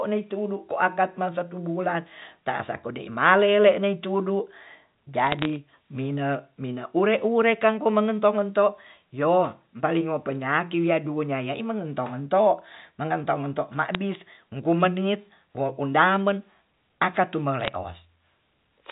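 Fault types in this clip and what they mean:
Bit errors on a digital phone line: at 5.20–5.56 s, 13.94 s and 17.60–17.75 s, flipped bits in the G.711 A-law stream each corrupt one sample, so hits on the sign or high bits snap out as sharp ticks that cluster into short crackle over the speech.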